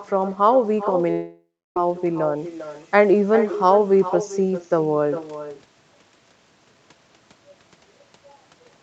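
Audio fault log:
throughout, echo with no canceller: Every phrase returns about 0.4 s later as a quieter, thinner copy, about 12 dB below the talker. The far end's loudspeaker feeds its microphone. Nothing removes that pickup, so it travels back across the network.
1.11–1.77 s, long network dropout: About 0.65 s of speech never arrives. The receiver stretches the last sound into a buzz that fades away, leaving roughly 0.29 s of silence. Speech then resumes further on. The likely cause is lost network packets.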